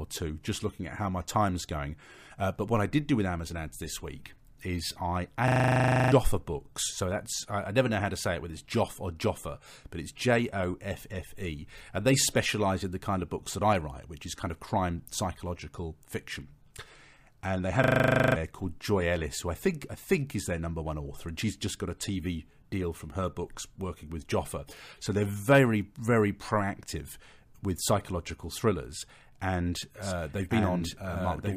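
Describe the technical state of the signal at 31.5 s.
At 31.5 s there's a doubled audio track running from 30.02 s to the end: a second copy of the speech, about as loud, trailing roughly a second behind, likely from a slower capture path.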